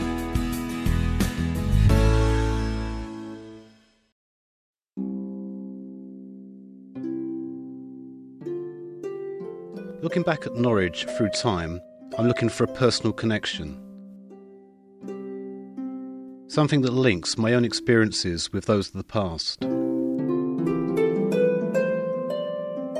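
Nothing stood out as a technical problem on listening to this recording.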